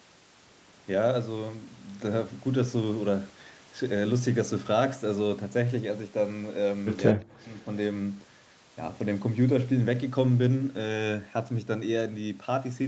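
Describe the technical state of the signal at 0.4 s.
At 0.4 s the speech comes through intact, with nothing above 8 kHz as expected from a call path, and no fault at that moment.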